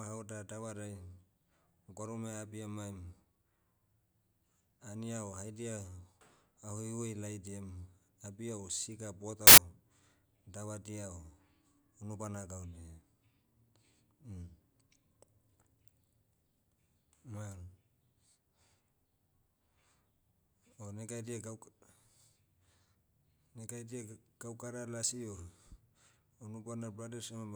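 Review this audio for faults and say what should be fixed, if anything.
From 9.47 to 9.58 s the speech is replaced by a burst of loud, harsh broadband noise: samples built from the wrong bytes. For about 0.1 s the reader misassembled each sample, so the rapidly changing low bits landed in the significant positions and swamped the signal. To prevent it, verify the sample format, byte order and frame alignment wherever the stream is read or resynchronised.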